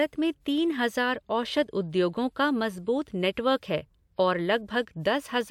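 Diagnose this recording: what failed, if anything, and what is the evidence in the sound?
Nothing failed; no fault is audible in the speech.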